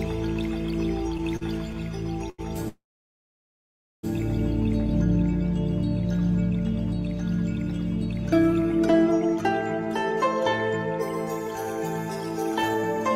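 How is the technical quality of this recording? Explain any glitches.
The recording has four network-related glitches: two short stalls, one long freeze, and a brief speed-up near the end.

Short stall from a late packet, 1.37 to 1.43 s and 2.30 to 2.40 s: a packet was late and the receiver's jitter buffer ran dry. The receiver stretched the last bit of audio to cover the wait, about 44 ms the first time and 85 ms the second. Each moment sounds briefly held, with a faint buzz or dip. Nothing is lost, and the audio picks up exactly where it left off.

Call audio freeze, 2.68 to 4.05 s: the likely cause is packets held up in transit long enough to empty the jitter buffer. The receiver filled about 1.35 s in total. It carries the last sound on briefly as a fading tail, then leaves roughly 1.23 s of silence. When the audio returns it continues from the same point, so a gap has been inserted and none of the audio is missing.

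Jitter buffer speed-up, 12.51 to 12.83 s: the buffer was holding more audio than its target, so the receiver trimmed many short pitch-period slices to reduce the delay, around a tenth of a second in all. This passage plays at about 126% speed without changing pitch, so it sounds rushed.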